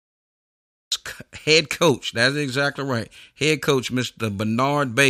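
The clip opens with a cut-off start. From 0 to 0.92 s there is only digital silence, then the speech begins abruptly at "head coach" with no natural attack or fade-in. Capture began late, so the sound enters mid-stream already underway.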